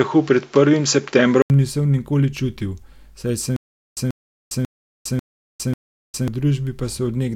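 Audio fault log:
0.0–1.5 s, input switched to a poorer device: the speech is band-limited with nothing above 7.6 kHz, carries a new noise floor well below the signal, and differs in level by roughly 5 dB. An 80 ms silence marks the switch before "nisem nikoli čutil saj". A mid-recording change to a narrower-band microphone is the likely cause.
3.56–6.28 s, stutter with silent gaps: after "nisem nikoli čutil saj", a 137 ms fragment repeats 5 times, each followed by 406 ms of digital silence, giving a steady 543 ms period. The likely cause is a stalled stream replaying its last buffer on each retry, so the audio for that span is lost.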